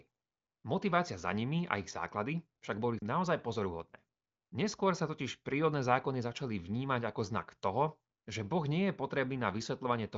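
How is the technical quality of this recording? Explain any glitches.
No glitches turn up anywhere in this speech recording; it has the sound of AMR wideband (HD Voice) at a high rate, consistent with about 23.05 kbit/s, with nothing above 7.5 kHz, exactly as that phone-style codec delivers it.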